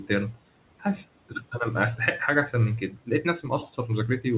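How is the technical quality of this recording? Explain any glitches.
The recording has two related glitches, both caused by the noise suppressor, heard through a narrowband call path with nothing above 4 kHz, which points to a telephone codec such as G.711.

Noise suppressor artifacts run through the whole clip. The suppressor estimates the steady room noise and pulls those frequency bands down, here by about 18 dB, recalculating frame by frame. Between phrases the background sinks well below its natural level, then rises again under the speech.

Speech cut by the noise suppressor occurs twice, from 1.29 to 1.54 s and from 2.9 to 3.25 s. In both spots the suppressor misjudged quiet parts of the speech as noise and attenuated them along with the background, by up to about 14 dB in the first case and about 12 dB in the second. Only part of each span is hit, around a tenth of a second and 0.15 s respectively, so soft consonants or word endings there sound swallowed and faint.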